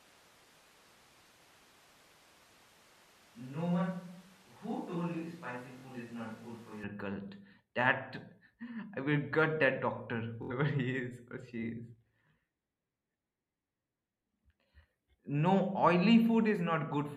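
Switch to a distant microphone, from the very start of the speech to 6.83 s: the sound is roomy and hollow with thin bass, roughly 5 dB quieter, and room noise sits only about 25 dB below the speech. That points to the close microphone's signal dropping out, with the recording likely falling back to a pickup further away, such as a camera's. At 6.83 s the close, fuller sound returns abruptly. Bluetooth stutter occurs at 5.78 to 5.85 s and again at 10.43 to 10.52 s, just after "will gut that doctor". Each is a brief buzzing repeat in which a tiny slice of sound, around 20 ms, replays while the wireless link waits for late or missing data. Speech then resumes further on, as though it had kept playing. About 46 ms of audio is lost at the first stutter and about 70 ms at the second, which fits two and three dropped packets.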